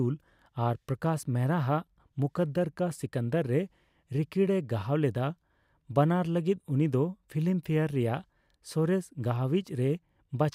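No technical faults can be heard anywhere in the speech; the signal stays steady and intact throughout.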